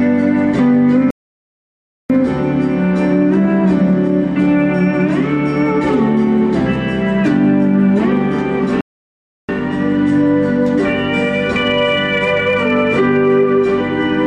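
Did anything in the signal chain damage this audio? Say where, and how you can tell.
Yes. The fault sits at the playback stage: two playback stalls, most likely the player running dry of data or its thread being blocked. The output drops to silence in mid-flow from 1.11 to 2.10 s, roughly a full second, and again from 8.81 to 9.49 s, about 0.68 s. Each gap is an abrupt halt rather than a fade, and the audio then carries on once the player recovers.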